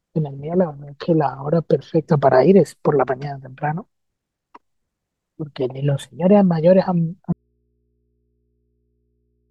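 At 7.33 s the speech drops out abruptly and never returns, leaving only a low mains hum roughly 50 dB under the signal. That's an audio dropout to a faint residue, likely the source disconnecting while the input stayed live and picked up hum.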